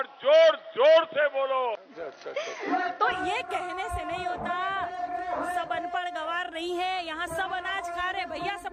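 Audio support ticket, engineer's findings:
0.0 to 3.12 s: dull, boxy top, nothing above 6.2 kHz, its own noise roughly 35 dB under the signal. Clean switch at 3.12 s, no gap, level jumps around 5 dB. Likely input switched to a poorer device with a narrower band.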